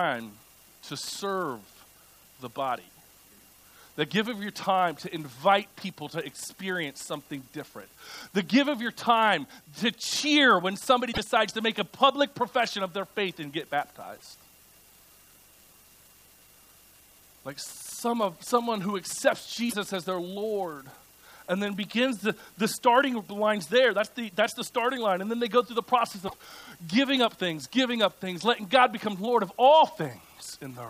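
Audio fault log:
11.09–11.19 s, 14.15–14.23 s, 19.66–19.74 s, 26.24–26.34 s: damaged data in a compressed stream. The decoder misreads corrupted frames and resyncs, giving brief chirps, squawks, clicks or short holes that appear as broadband smears and jagged waveform breaks.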